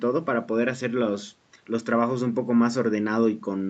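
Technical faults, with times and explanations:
Nothing in this speech stood out as a technical problem on listening.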